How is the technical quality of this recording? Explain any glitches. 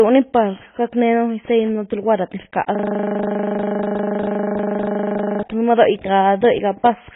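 Technical quality is poor: heavy codec damage runs through the whole clip, and the audio freezes into a buzzing loop for almost three seconds in the middle.

AAC compression, present throughout: the sound is dull and muffled, with nothing above about 3.8 kHz and a watery, fizzy smear on sibilants. This is likely low-bitrate AAC-LC encoding, around 16 kbps by the sound of it. The encoder drops the upper spectrum entirely and quantises what remains coarsely. On a spectrogram this appears as a hard ceiling near 3.8 kHz, with patchy holes in the bands below it.

System hang loop, from 2.75 s to 5.43 s: a single 40 ms slice of audio repeats exactly, some 67 times. The computer or driver stalled while the sound hardware kept replaying the same buffer. At a 25 Hz repeat rate, this produces a steady buzz. In the waveform it shows as one identical short pattern tiled end to end. On a spectrogram it forms a uniform striped block with vertical lines every 40 ms.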